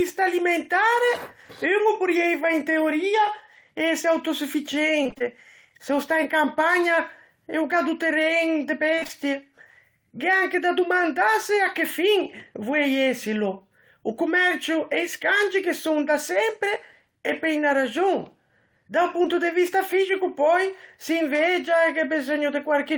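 Speech with repeated packet loss (robotic sound) at 5.03–5.23 s, just before "se o stà in", and at 8.95–9.11 s, right after "do terren e de". In each stretch, holes of up to about 23 ms and 26 ms recur in quick succession. Each is patched by extending the preceding sound, so roughly half of each span is synthetic fill, which gives a choppy, mechanical texture. Short concealed packet loss at 19.23–19.26 s leaves about 20 ms of audio undelivered, partly bridged by continuing the prior sound and then crossfading back, which is heard as a brief smear.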